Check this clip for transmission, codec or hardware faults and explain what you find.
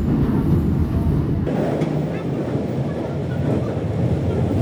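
One fault is present. Section at the wrong speed, from 1.47 s to the end: playback jumps to 1.86 times the original rate, likely because that stretch was clocked wrongly in editing or playback. Speed and pitch rise together, so the sounds turn hurried and shrill, about ten semitones higher.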